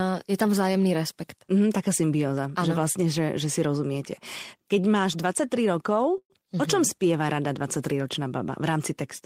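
Packets were likely held up in transit long enough to drain the jitter buffer, causing a call audio freeze in this speech clip at 6.18–6.32 s. The last sound is stretched into a fading buzz or hiss and then about 60 ms of silence. Speech resumes where it stopped, with nothing lost, but everything after runs 121 ms late.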